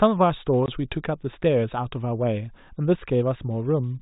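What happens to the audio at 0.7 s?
A short hole opens in the speech, with the audio dropping to dead silence from 0.66 to 0.68 s, with hard edges. This is packet loss filled with silence: the missing 20 ms, which fits two 10 ms packets, was replaced with nothing rather than concealed.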